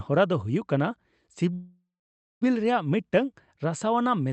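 At 1.53 s packets likely stalled, draining the jitter buffer. The call audio freeze fades to about 0.57 s of silence, and speech resumes intact at 2.43 s.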